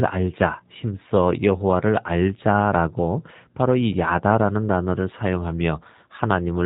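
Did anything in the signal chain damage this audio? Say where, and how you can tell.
Yes. Throughout this speech, the codec stage left a hard ceiling near 4 kHz and a rough, slightly synthetic buzz, which fits G.729 at 8 kbit/s. Speech is rebuilt from a filter, pitch predictor and sparse pulses, so unlike simple band-limiting, the voice texture itself is altered.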